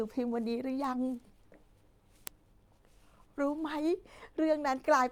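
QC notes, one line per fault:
0.84–3.70 s: word clock ticks. About three short, sharp ticks, spaced roughly one and a half seconds apart, sit on the speech. The receiving converter is free-running rather than locked to the source's word clock, and the two clocks differ by around 15 ppm. Each time they slip a full sample relative to each other, a single sample is dropped or repeated, and that small discontinuity in the waveform comes through as a click at a steady interval.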